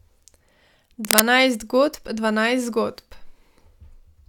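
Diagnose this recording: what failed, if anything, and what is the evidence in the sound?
A burst of dense, ragged scratching rides over the speech from 1.05 to 1.20 s, a few decibels louder than the speech itself. This is cable scratch noise in the analogue wiring, likely a worn cable or connector being moved so its contact resistance fluctuated rapidly.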